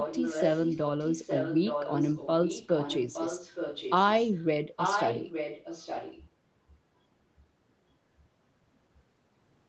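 From the start of the speech there's an echo leak: a delayed copy of the talker comes back about 0.87 s late. It runs from 0.0 to 0.8 s, 0.99 to 2.28 s, 2.44 to 4.12 s, a brief faint scrap at 4.32 to 4.46 s, then 4.76 to 6.24 s. It's strong, only about 5 dB down in most stretches, softer around 2.44 to 4.12 s, and barely there at 4.32 s. The likely cause is a far-end echo canceller letting its loudspeaker pickup slip back into the call.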